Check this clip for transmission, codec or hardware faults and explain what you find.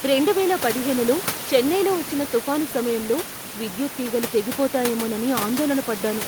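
No transmission, codec or hardware faults are present.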